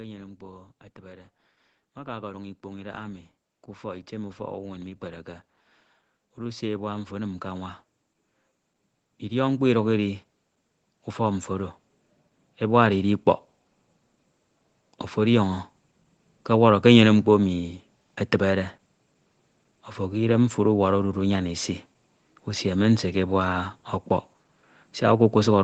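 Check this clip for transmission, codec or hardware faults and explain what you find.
One fault is present, automatic gain rising. The audio tops out at 8 kHz, which fits Opus at around 20 kbps on a call path and is normal band-limiting, not a fault.

From 0.37 s to 16.84 s the gain control, treating the input as too quiet, raises its gain step by step, by about 19 dB overall. Speech and background swell together slowly, unlike a sudden level jump or pumping that rises and falls between syllables.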